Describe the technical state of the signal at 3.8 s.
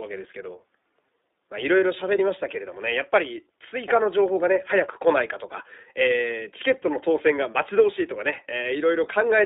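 At 3.8 s you're hearing the iLBC codec, which runs through the whole clip, so that moment sits well inside it. The speech is squeezed into a telephone band of roughly 300 Hz to 3.7 kHz, so it sounds thin and boxy. iLBC codes each 20 ms frame's excitation on its own, without borrowing from the previous frame, and that leaves a plainly audible rough, slightly synthetic grain, which fits the 15.2 kbps mode.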